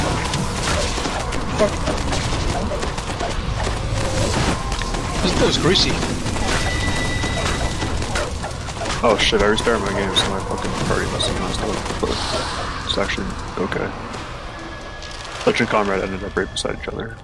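Nothing here needs flagging; the audio runs along without a single technical fault to point to.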